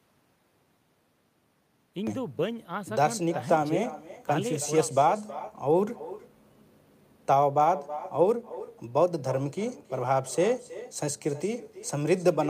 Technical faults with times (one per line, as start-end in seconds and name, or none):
0.00-12.49 echo with no canceller
0.00-2.07 audio dropout to silence